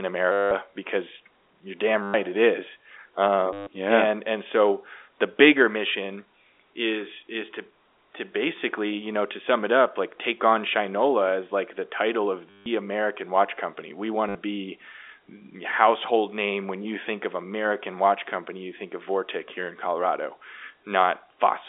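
Packets were dropped and the receiver replayed the last one until new audio arrived (packet loss with last packet repeated) at 0.32, 2.03, 3.53, 12.5 and 14.29 s, lasting 60 to 190 ms. Each gap is a robotic stutter buzzing near 100 Hz, which fits 10 ms packets.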